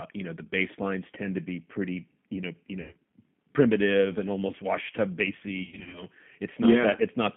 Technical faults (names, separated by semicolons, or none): G.729 codec; VoIP packet loss concealed by the speech codec